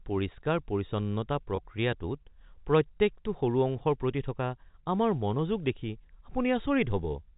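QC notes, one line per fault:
1.56–1.58 s, packet loss with pitch repetition: about 20 ms of speech drops out, pointing to a single lost packet, and the last pitch cycle is looped across the gap, giving a brief held, buzzy tone. The waveform shows identical repeated cycles, and the spectrogram shows flat, frozen harmonic bands under the 4 kHz G.711 telephone ceiling.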